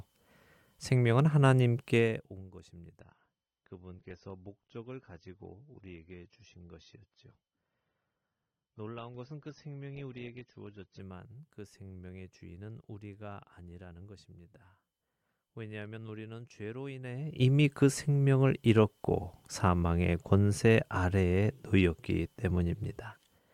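From 3.00 s to 11.00 s the speech drops to an adaptive stream at a lower bitrate. The switch is abrupt and gapless, nothing remains above 6.3 kHz, and codec artefacts rise, which fits a fall from about 96 kbit/s to 24 kbit/s AAC.

Between 17.04 s and 17.43 s there is zipper noise: a level change of roughly 20 dB is applied in unsmoothed steps, around 200 a second, and each step leaves a small click, giving a brief ticking rasp over the speech.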